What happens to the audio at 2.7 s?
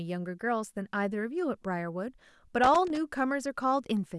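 Right around there you get a burst of loose connector crackle, running from about 2.64 to 2.97 s. A worn or dirty contact is making and breaking as it shifts, chopping the speech, so it comes across as ragged, scratchy crackle.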